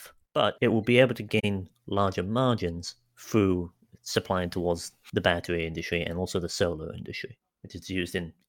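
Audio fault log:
1.39–1.44 s, AAC frame loss with muting: just after "will be able to", the speech sinks into a soft-edged gap of about 43 ms before returning on "larger margins through supplying". The length fits about two lost AAC frames whose spectra the decoder zeroed. The overlapping transform windows fade the sound down and back up rather than cutting it. That gradual ramp is what sets it apart from a hard sample dropout or a concealed gap filled with repeated sound.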